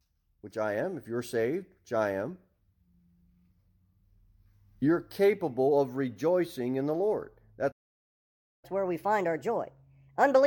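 At 7.71 s the speech cuts off mid-flow and there's dead silence until 8.65 s, a gap of a bit over 0.9 s. That's a playback stall: the output simply had nothing to play for that stretch, most likely because the player ran dry of buffered data or its thread got blocked. It's abrupt, with no fade, and the speech picks up again once the player recovers.

Right after it comes back at 8.65 s, the player goes into catch-up at higher speed and stays there to the end. It's chewing through the backlog 1.25 times faster by resampling, so the speech is both quicker and higher, up by roughly four semitones. You get that chipmunk, hurried quality as it tries to win back the time lost in the gap.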